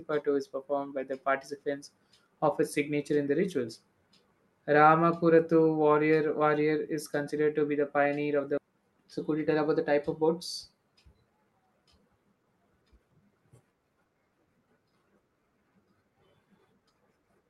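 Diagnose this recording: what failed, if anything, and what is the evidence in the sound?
A skip ahead happens in the network and jitter buffer stage at 8.57 to 8.59 s, right after "the pioneer of the". The speech jumps forward with no gap filled. About a second of audio was discarded while later packets already waited, so the two sides join almost directly.

A jitter buffer speed-up follows from 8.68 to 11.68 s. The speech runs at about 108% speed with unchanged pitch and sounds hurried. The buffer held too much audio, so the receiver trimmed short pitch-period pieces repeatedly, removing roughly a third of a second.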